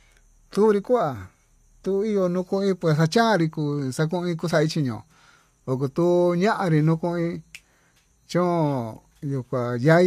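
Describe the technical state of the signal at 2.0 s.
At 2.0 s the speech signal is intact, with no audible fault at that point.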